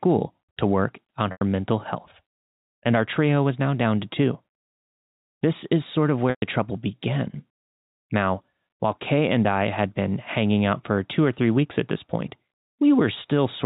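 Speech over a G.711 telephone path, with packet loss with pitch repetition at 1.32 s (after "to work on", 90 ms) and 6.30 s (after "is sort of", 120 ms). The receiver loops the last pitch period, fading to near-silence before speech cross-fades back. Unlike a plain dropout, each gap starts as a held buzz.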